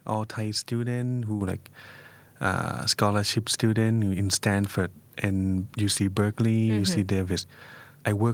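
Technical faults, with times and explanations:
1.41 s: microphone volume stepped up. Input gain jumps about 5 dB in one step, so voice and background get louder together as the software corrects a quiet microphone.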